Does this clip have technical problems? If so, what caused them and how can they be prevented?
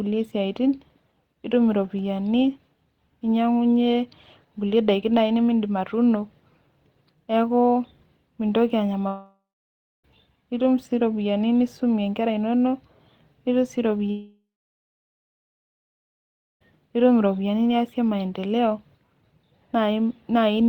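Yes. Speech cuts out at 9.07–10.05 s and 14.1–16.6 s, with a fading buzz and then silence, resuming before "nitum sii ropiyiani nisumie". This is likely a long network dropout. A more stable connection with jitter buffering and retransmission prevents it.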